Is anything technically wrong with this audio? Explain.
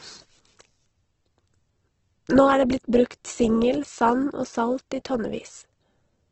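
Yes. Throughout the speech there is audible Opus compression damage, heavy enough that the likely cause is a low-bitrate Opus encode. Nothing is present above about 8.1 kHz, a wideband limit that fits a rate around 12 kbps. The texture points to the music-oriented CELT mode: band energies survive, but starved bands are refilled with folded or noise content, so voiced sounds come out rough, grainy and noisy rather than swirly, with a dull top.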